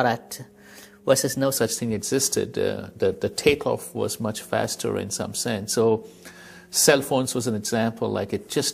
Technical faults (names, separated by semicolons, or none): section at the wrong speed